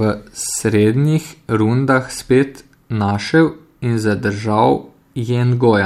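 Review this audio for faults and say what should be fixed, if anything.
Clock slip clicks run from 0.11 s to 5.86 s. Soft ticks recur roughly every 30 ms. Likely unsynchronised clocks slipping one sample at a time. Lock both devices to a shared word clock, or use drift-correcting resampling between them.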